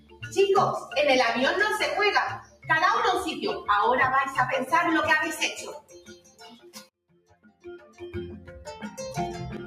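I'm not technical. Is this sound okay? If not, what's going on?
No, it isn't quite right. A noise suppressor meant for speech was left on, and it's being applied to music or sounds. It mistakes steady tones and lingering tails for background noise, so the level keeps dipping and swelling, and held parts go thin.

You'll hear specific moments of sound cut by the noise suppressor: right at the start to 0.37 s, 2.35 to 2.69 s, 5.57 to 6.9 s, and 7.09 to 8.01 s. There the sound drops away sharply and fades get chopped short.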